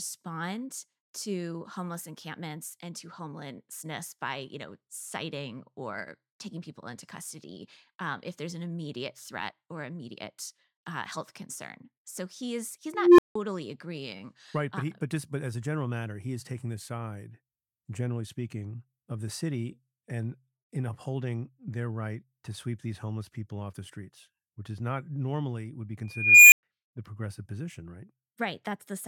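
A speech clip where a tone swells to a squeal and then drops to silence twice: a low tone of around 400 Hz at 12.87 to 13.35 s, then a high one of around 2 kHz at 26.07 to 26.63 s. Each builds over 318 ms and 452 ms, then cuts out for 170 ms and 110 ms. This is an unstable filter: faulty coefficients let a recursive filter's output grow until it clipped and overflowed.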